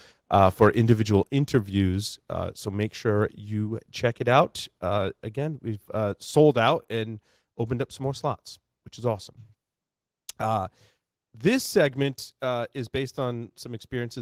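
From 0.61 to 0.93 s the speech runs into microphone overload: peaks push about 2 dB past the converter's ceiling and get flattened, with under one percent of samples clipped. That's likely an input gain set too hot, and you hear it as a gritty crackle on the loudest syllables.

Then there's a microphone volume step-down at 1.23 s, where everything, voice and background, drops about 4 dB at once, likely the call software pulling the input level back after that clipping. It steps down again at 6.51 s by about 3 dB, between "again we've uh" and "out and opened up", and once more at 12.03 s by about 2 dB.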